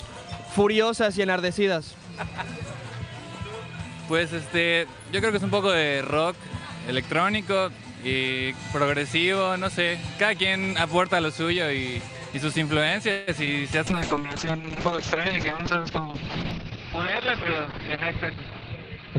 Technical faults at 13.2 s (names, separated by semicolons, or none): call audio freeze